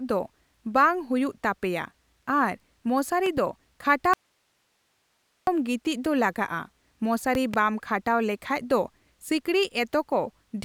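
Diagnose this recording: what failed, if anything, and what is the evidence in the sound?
Loud pops, each a pair, at 3.26–3.40 s and 7.35–7.56 s, about 10 dB above the speech, likely voltage steps from a faulty analogue connector.

Audio dropout to a faint residue from 4.14 to 5.47 s: speech cuts abruptly to hiss about 45 dB down, resuming at "ᱜᱤᱛᱤᱪ ᱫᱚ ᱞᱟᱜᱟᱜᱼᱟ", likely a broken analogue connection.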